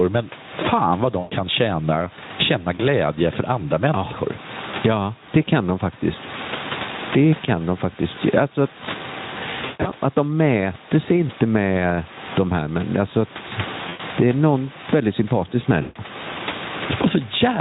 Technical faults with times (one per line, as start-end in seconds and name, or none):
0.00-17.61 gain pumping
1.19-1.33 VoIP packet loss concealed by the speech codec
2.75-2.85 VoIP packet loss concealed by the speech codec
4.71-4.75 VoIP packet loss concealed by the speech codec
9.61-9.92 VoIP packet loss concealed by the speech codec
13.89-14.01 VoIP packet loss concealed by the speech codec
15.81-15.97 VoIP packet loss concealed by the speech codec